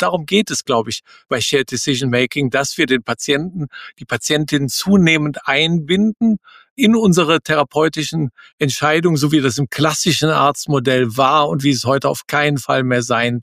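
A noise suppressor built for speech was left running on this audio, and it keeps treating held and fading material as noise, so levels pump by roughly 5 dB throughout. The sound is also cut by the noise suppressor at 0.16–0.51 s, 1.07–1.32 s and 3.41–3.68 s, dipping about 10 to 11 dB as sustained parts sink.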